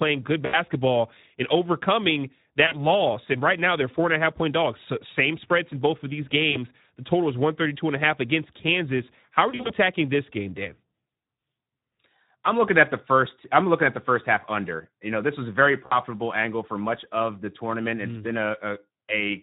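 Speech coded with the Speex codec sounds plainly hoarse and noisy throughout. The CELP coder has too few bits for the excitation, which fits a rate of about 11 kbps. Voiced sounds lose their clean texture and take on a rough, grainy edge. VoIP packet loss concealed by the speech codec breaks in five times: 0.46–0.58, 2.67–2.86, 6.51–6.57, 9.49–9.74 and 15.85–15.99 s. The decoder repeats its last pitch and filter with falling gain. Each gap is stretched into a fading buzzy tone or coloured noise. The 9.49 s stretch is scattered short dropouts, and the first gap fits about 80 ms of lost audio.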